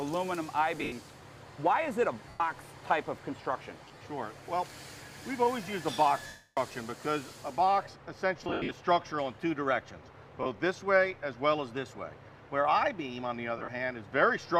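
Lost LE Audio frames at 0.78, 2.29, 3.85, 6.27, 8.39, 10.43 and 13.58 s. The LC3 decoder fills each gap of 30 to 300 ms by repeating the last spectrum with scrambled signs, so tones smear into noise. The longest gap, at 6.27 s, fades toward silence.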